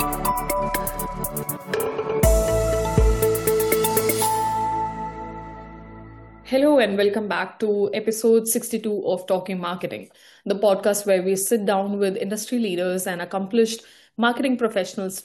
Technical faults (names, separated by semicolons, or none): none